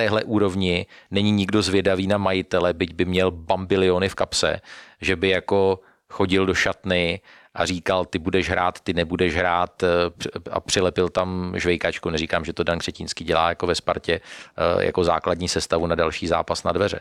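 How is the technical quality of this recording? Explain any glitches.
No glitches or technical faults can be heard here.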